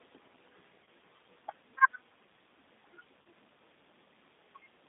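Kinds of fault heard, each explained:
G.729 codec: speech is rebuilt from a vocal tract filter and pulse excitation, band-limited to 200 Hz to 3.7 kHz, with plainly audible roughness throughout.
VoIP packet loss concealment by the speech codec: two 30 ms dropouts, at 0.84 s and 3.22 s, become a fading buzzy tone or coloured noise, each consistent with one lost packet.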